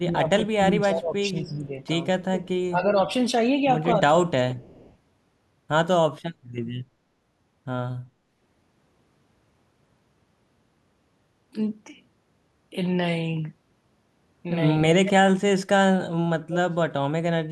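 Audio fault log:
0.0–0.23, 0.4–1.72, 2.15–2.47 and 2.7–2.86 s: speech suppressed in double talk. The speech dips by about 10 to 20 dB in patches, likely because the echo canceller ducked it while the far side spoke.
4.12–4.27 s: speech suppressed in double talk. There is a brief dip of about 10 dB, likely the canceller again mistaking overlapping talk for its own echo.
4.55–4.96 s: echo leak. A faint copy of the speech trails about 0.25 s behind, some 30 dB down, likely loudspeaker pickup that the far end's canceller failed to remove.
14.91–15.62 and 16.45–17.34 s: speech suppressed in double talk. The speech nearly vanishes, dropping by about 40 and 35 dB, likely heavy canceller suppression during simultaneous talk.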